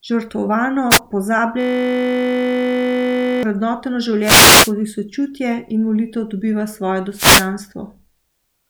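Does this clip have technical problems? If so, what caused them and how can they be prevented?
Yes. Short swishes and bursts of static break into the speech at 0.90 to 1.00 s, 4.21 to 4.73 s just before "sočutje in molitev dobiva", and 7.12 to 7.50 s just after "in molitev dobiva svoje". These are wireless microphone noise hits: the analogue FM radio signal fades as reflections cancel, and receiver noise rises over the voice. Diversity receivers, well-placed antennas and a clear line of sight prevent them.

From 1.61 to 3.43 s a steady 50 Hz buzz replaces the speech. This system hang loop is the hardware replaying one 20 ms buffer about 91 times while the computer or driver stalled. Stable drivers and a dedicated recording machine prevent it.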